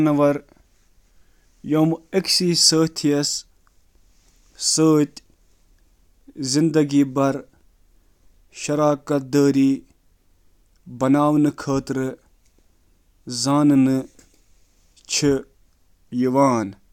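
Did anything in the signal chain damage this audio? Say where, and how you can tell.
No, the chain caused no damage.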